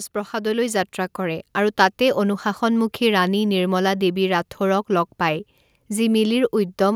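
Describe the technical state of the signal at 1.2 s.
At 1.2 s the signal is midway through an automatic gain rising episode that runs from 0.12 to 2.47 s and ends just before "মুখী ৰাণী নিৰ্মলা দেৱী". The gain control judged the input too quiet and is stepping its gain up slowly, by about 6 dB overall. What separates this from a speaker simply talking louder is that the room noise swells in lockstep with the speech, so the whole signal climbs together.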